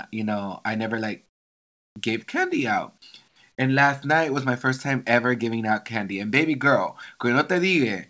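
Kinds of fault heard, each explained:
Comfort noise in place of the background: the sender likely halted transmission in pauses, so the receiver substituted flat synthetic noise, about 20 dB quieter, after "know I never like".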